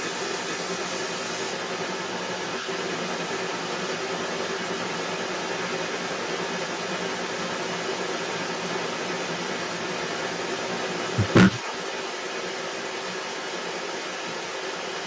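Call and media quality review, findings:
Echo leak, 0.0 to 15.1 s, whole clip: delayed copy of the speech trailing it by about 179 ms, fairly loud, only a little under the direct voice. Likely far-end speakerphone, echo canceller not removing the loudspeaker pickup. Band stops at 8 kHz, as expected.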